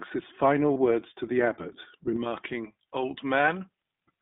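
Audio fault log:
throughout, iLBC codec: The speech sounds narrow and slightly rough and synthetic, with nothing above about 3.6 kHz and little below 200 Hz. Each 20 ms frame's excitation is coded on its own, with plainly audible damage that fits iLBC's 15.2 kbps mode.
0.74–0.77 s, lost iLBC frames: Between "his final" and "words to the", a brief held, faintly buzzy vowel replaces the signal. The decoder filled a gap that fits one missing 20 ms frame by repeating the last pitch cycle mixed with noise, then recovered at once.
2.16 s to the end, pre-emphasis left on: From here the sound turns thin, bright and sibilant. A treble boost that fits the J.17 curve, about 11 dB higher at 10 kHz than at 1 kHz, was applied without the matching de-emphasis to restore the balance.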